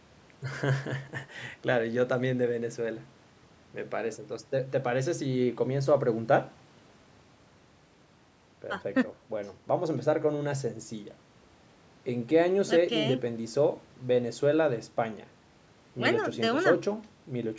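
Speech that has passed through a call's microphone processing, with the lowest bass trimmed and no content above 8 kHz as expected for that path, and no technical faults can be heard.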